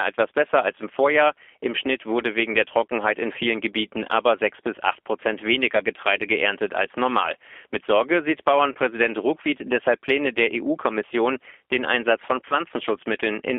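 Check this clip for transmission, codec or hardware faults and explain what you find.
The clip shows a codec fault throughout and two brief dropouts.

G.729 codec, throughout: the speech is rebuilt from a vocal-tract filter and sparse pulses, which fits 8 kbit/s G.729A. It sounds plainly rough and synthetic, confined to roughly 300 Hz to 3.5 kHz.

VoIP packet loss concealed by the speech codec, at 8.72–8.78 s and 12.48–12.55 s: each gap fits a single lost 30 ms packet. The decoder stretches the last pitch and filter into a fading buzzy tone or coloured noise, and the speech stays weak or distorted as it recovers.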